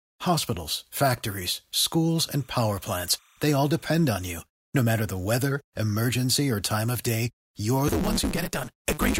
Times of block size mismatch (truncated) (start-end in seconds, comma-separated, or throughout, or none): 7.87-9.19